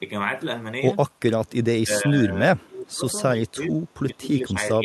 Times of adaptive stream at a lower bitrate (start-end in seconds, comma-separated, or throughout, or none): none